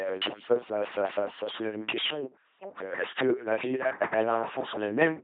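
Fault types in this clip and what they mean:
LPC-10 vocoder: the speech was resynthesised from a small vocal-tract filter driven by pulses or noise, fitting a 2.4 kbit/s link, leaving heavy buzzy, robotic damage and nothing above 3.8 kHz.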